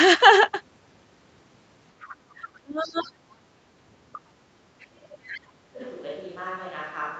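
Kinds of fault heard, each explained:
Other side's voice leaking through: Faint scraps of a second talker at about 2.0, 2.43, 2.83 and 4.13 s, some 20 to 25 dB under the main speech, likely echo the canceller missed. On a spectrogram they appear as weak, broken harmonic traces; the waveform shows only small bursts.
Speech suppressed in double talk: From 2.61 to 3.21 s and 4.78 to 5.8 s the main speech sinks, by as much as about 25 dB, while the other side talks, likely as the echo canceller ducks both. The waveform envelope caves in there, and spectrogram energy fades.
Switch to a distant microphone: At 3.48 s the sound abruptly turns roomy and hollow for the rest of the clip, with level down about 10 dB and room noise about 30 dB below speech. The waveform steps down; the spectrogram shows a raised noise floor, smeared tails and thinner bass.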